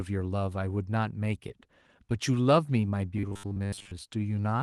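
Speech clip with robotic sound from repeated short buffers between 3.17 and 3.91 s. A rigid 100 Hz metallic buzz replaces most of the sound, likely from 10 ms buffers replaying while audio arrives too slowly.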